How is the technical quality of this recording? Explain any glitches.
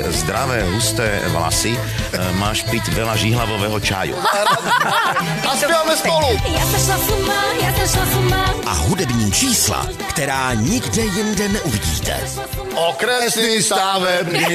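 The technical quality of the recording is sound, with no glitches to explain.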